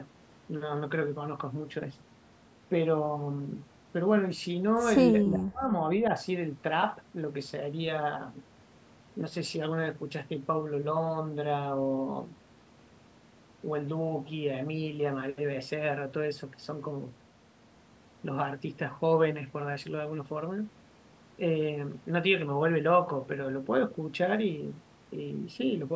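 From 5.24 to 5.81 s the speech drops out almost completely, falling by about 40 dB over roughly half a second. That's most likely speech suppressed in double talk, with the echo canceller mistaking the talker for loudspeaker echo while the far end spoke.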